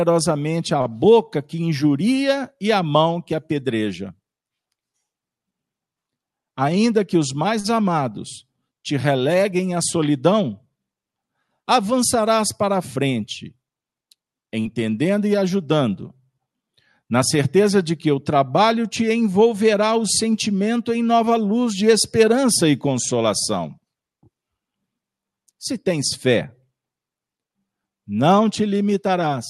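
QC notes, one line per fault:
0.81–0.87 s, short stall from a late packet: a packet arrived late and the jitter buffer ran dry, so the last sound is stretched by 40 ms, heard as a brief held sound.
6.45–6.91 s, jitter buffer speed-up: the buffer held excess audio, so the receiver trimmed pitch periods, about 50 ms in all, making the speech run at 109% speed, briefly hurried.
7.60–7.66 s, short stall from a late packet: after "que os" a late packet emptied the buffer; the last sound is held 44 ms before "amados te releguem à" continues.
14.60–14.67 s, burst of packet loss: lost packets left a 46 ms gap, filled with the previous sound held and fading, then the audio resumes with "e ajudando" with 40 ms missing.
23.13–23.66 s, jitter buffer speed-up: after "luz de esperança e" the overfull buffer was drained by cutting around 50 ms of pitch periods, so the speech runs at 108% speed and sounds rushed.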